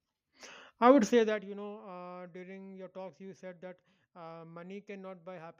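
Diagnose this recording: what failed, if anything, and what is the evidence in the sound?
Zipper noise appears in the speech from 1.04 to 1.5 s. The failure sits in the gain stage at the buffer level. A level drop of around 20 dB is applied in 1 dB jumps rather than a smooth ramp. Each jump puts a tiny discontinuity in the waveform, so a fine ticking rides on the speech while the level falls. The ticks come about fifty times a second. That rate fits a gain value updated once per processing block with no interpolation between blocks.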